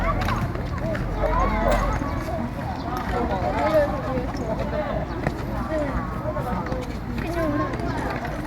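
No technical faults can be heard anywhere in the recording, so there is nothing to describe in time order.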